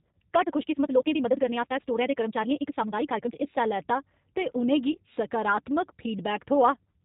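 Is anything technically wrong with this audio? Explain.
Yes, there are three problems: codec damage across the whole clip, a sped-up opening, and a brief dropout near the five-second mark.

From 0 to 3.44 s the speech runs at about 1.76 times normal pace while its pitch stays put. This is a time-stretched section, likely produced by software compressing the passage by discarding short slices of audio and splicing the rest together. It sounds rushed, and the pace relaxes abruptly at 3.44 s. On a waveform the syllables sit crowded together, and a spectrogram shows tightly packed harmonic bands at unchanged spacing.

Between 4.92 and 4.97 s there is VoIP packet loss concealed by the speech codec. About 20 ms of audio went missing, which fits a single lost packet. The decoder covered the gap by extending its last pitch and vocal-tract settings at falling gain, so the sound is briefly stretched into a buzzy tone or coloured noise that fades. 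Because each frame depends on the previous one, the speech stays thin for a moment after real data resumes. A spectrogram shows smeared, repeated harmonics there, and the waveform shows a short dip in level.

Throughout, the audio carries plainly audible G.729 codec damage, consistent with an 8 kbit/s G.729A stream. This codec rebuilds speech from a filter model, a pitch predictor and a few pulses per 10 ms frame rather than sending the waveform. The result is rough and slightly synthetic. A spectrogram shows nothing above 4 kHz, a hard ceiling, and the harmonics look coarse and blurred from frame to frame.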